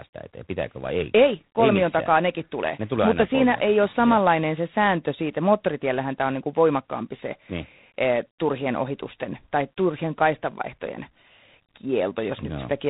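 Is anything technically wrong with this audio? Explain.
Yes. Throughout the speech the sound carries G.726 ADPCM damage: with too few bits per sample to code the difference from its adaptive prediction, a harsh, rasping hiss rides on the speech and follows its level, which fits a 24 kbit/s rate. Nothing above 3.9 kHz passes.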